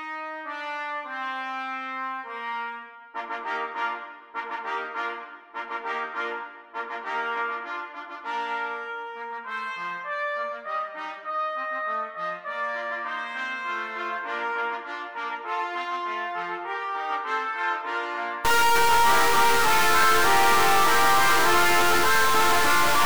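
A data bit is likely stuck from 18.45 s to the end at 23.05 s, throwing sample values off by roughly -15 dBFS and adding harsh, buzzy distortion and noise in pauses.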